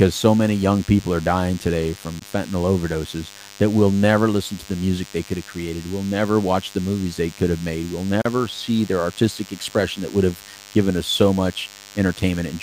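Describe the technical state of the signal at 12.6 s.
A nearby DECT base or handset is transmitting radio bursts every 10 ms that the audio circuit rectifies, so at 12.6 s the speech carries a thin 100 Hz DECT cordless phone buzz, rich in harmonics, roughly 20 dB below it and present throughout.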